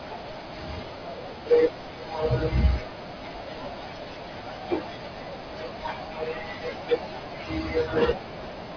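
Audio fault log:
No faults can be heard in this speech recording. Nothing in it calls for an entry in the log.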